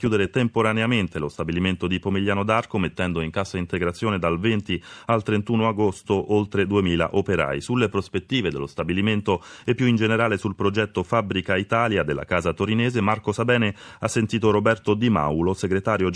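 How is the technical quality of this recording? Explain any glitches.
The technical quality of this recording is sound, with no glitches to explain.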